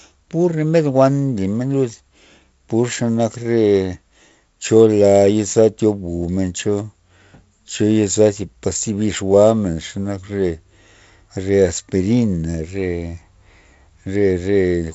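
No technical faults in this speech recording; the band stops at about 7.7 kHz with the faint upper-band hiss and slightly grainy low band of G.722 wideband telephone coding, which fits the codec running at its 48 kbit/s mode.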